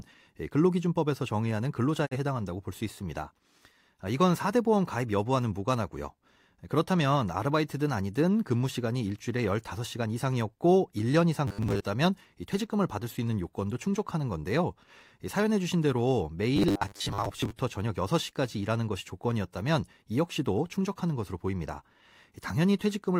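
A speech clip with two kinds of fault. A digital broadcast dropout runs from 2.05 to 2.17 s. The sound fades out over 20 ms and goes silent. Roughly 43 ms of audio is lost, which fits one failed frame. Robotic sound from repeated short buffers appears from 11.48 to 11.85 s and from 16.56 to 17.51 s. A rigid 100 Hz buzz is imposed on the speech. The likely cause is a 10 ms buffer being replayed, filling about half the time.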